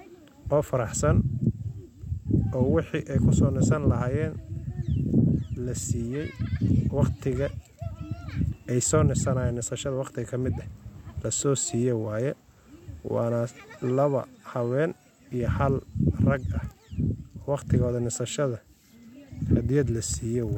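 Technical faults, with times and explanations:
Nothing technical goes wrong anywhere in this speech recording, so there's nothing to list here.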